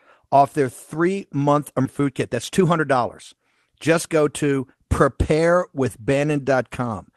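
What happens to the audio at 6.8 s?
Nothing goes wrong at 6.8 s: the speech carries on intact through the call path, with its top end ending at about 12 kHz, which fits Opus set to a 12 kHz bandwidth.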